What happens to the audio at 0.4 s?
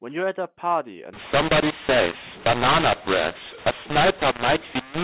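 Nothing goes wrong at 0.4 s: the speech carries on intact through that moment, heard through the telephone-band sound of G.711 mu-law coding, which is working as it should.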